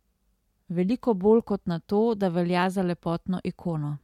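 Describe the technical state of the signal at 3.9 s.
At 3.9 s the speech signal is intact, with no audible dropout, distortion, clipping or other technical fault.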